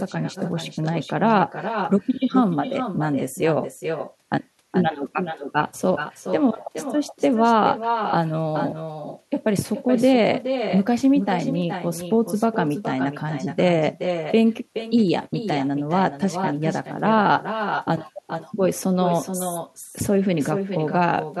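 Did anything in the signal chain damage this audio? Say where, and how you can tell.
Yes: echo with no canceller throughout, from call processing. The far end's loudspeaker feeds its microphone, returning every phrase roughly 400 ms later, about 8 dB quieter and thinner.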